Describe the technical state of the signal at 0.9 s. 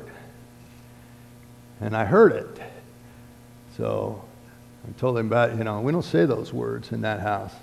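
Around 0.9 s the audio is intact, with no dropout, clipping, distortion or other fault present at that point.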